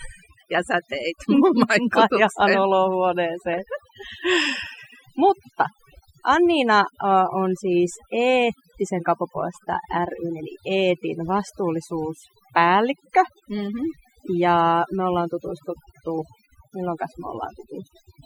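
Throughout the speech, overdone noise removal is at work: a noise reduction stage set far too aggressively shuts down individual frequency bands whenever they approach its noise estimate, taking quiet parts of the voice along. The background drops and breaks up into twinkling specks.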